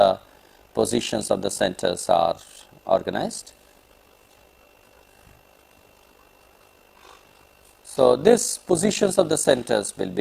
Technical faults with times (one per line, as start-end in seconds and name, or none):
0.00-10.20 overlap-add ripple